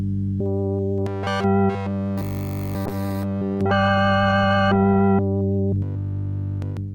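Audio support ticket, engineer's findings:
Call bitrate drop, 2.87 to 5.09 s. Audio turns coarse and muffled, highs gone, watery texture. Encoder-side: bandwidth estimate fell and the Opus rate was cut from 48 to 17 kbps for about 2.2 s, so coarser coding and a lowered top band until recovery.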